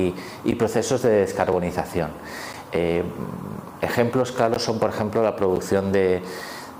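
Gaps between stream segments cut brief hard-edged silences at 0.51, 1.52, 2.53, 3.54, 4.54 and 5.56 s, one per 1-second segment, lasting 4 to 17 ms. Mistimed segment boundaries leave holes filled with silence; unlike dropouts, no audio is lost, only delayed.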